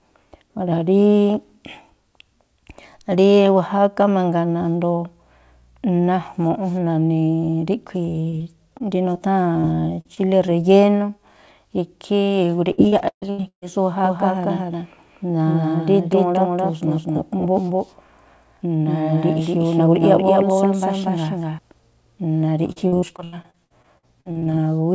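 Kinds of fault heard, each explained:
short concealed packet loss: Single 20 ms chunks of the call arrived too late for the decoder, which bridged each hole by extending the preceding sound. Between 8.30 and 9.65 s this gives five brief smears or wobbles, each barely a syllable fragment long.
repeated packet loss (robotic sound): Packets went missing again and again, so concealment patched one hole after another. Three choppy stretches result: 10.01 to 10.52 s, 12.72 to 13.66 s, where half is synthesized and one gap reaches 137 ms, and 22.72 to 24.48 s.
doubled audio track: From 14.05 to 21.59 s a second full-band copy runs about a fifth of a second behind, roughly as loud, with no room decay. It was likely caught by a slower second capture path. It begins and ends abruptly, sounding like a dry slapback.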